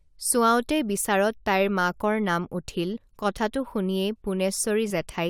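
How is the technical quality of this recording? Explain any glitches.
Two short dropouts from compressed frames skipped interrupt the speech. At 2.95 to 2.97 s the audio jumps ahead by roughly 70 ms, which fits about three missing 21.3 ms frames. At 4.89 s a smaller jump of about 20 ms fits a single frame. The decoder either never received those frames or rejected them as damaged, so it resumed later in the stream.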